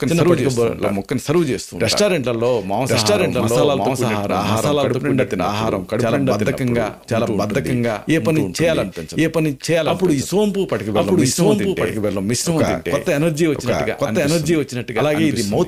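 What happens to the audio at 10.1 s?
At 10.1 s you're hearing a doubled audio track, and it runs through the whole clip: a second full-band copy sits about a second behind, at roughly the same level, with no decay or room colour. It's likely a slower capture path picking the sound up twice.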